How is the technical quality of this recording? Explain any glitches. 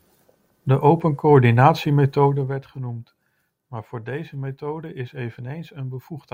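There's one glitch worth flagging in this speech recording: a burst of zipper noise from 2.26 to 2.65 s, just before "genoemd maar voor deze". The level drops by roughly 15 dB there, but instead of gliding down it moves in hard 1 dB steps, about fifty a second, with no smoothing between them. Each step leaves a tiny click, so for that short stretch you get a fast ticking, zipping texture riding on the speech while the level falls.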